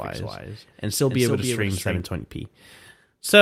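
Right from the top of this speech clip there's a doubled audio track, already running when the recording starts and cutting off abruptly at about 2.0 s. A second, full-band copy trails the original by roughly 300 ms and sits around 5 dB quieter, with no decay or room colour, so it sounds like a flat, slapback echo. The likely cause is the same signal being picked up twice, once through a slower path.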